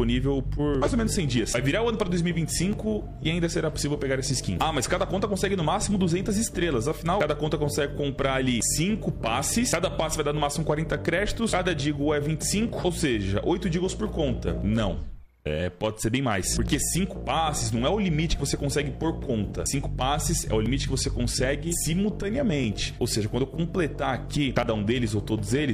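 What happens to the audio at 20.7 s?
An overlap between stream segments occurs at 20.66 to 20.69 s. Two consecutive 2-second segments claim the same stretch of time, so the player discards about 30 ms of sound as a duplicate. The waveform jumps across the gap, heard as a brief click or tiny skip.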